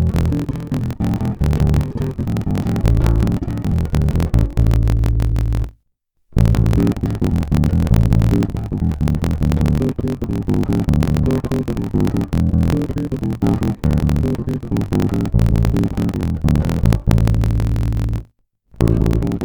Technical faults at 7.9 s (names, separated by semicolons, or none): block size mismatch (truncated)